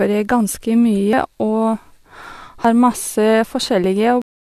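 Around 1.13 s the speech jumps forward, and about 70 ms of sound goes missing. Similar but shorter skips show up at 2.65 s and 3.84 s, each losing roughly 20 ms. There's no gap, just a joined seam. That's most likely a dropped buffer (overrun): the software didn't collect its samples before the hardware wrote over them.

At 4.22 s the speech stops dead, right in the middle of a sound. It falls straight to digital silence with no decay, and that silence runs to the end. That's a cut-off end: the final buffers never got written out, so the recording just stops wherever the writing stopped.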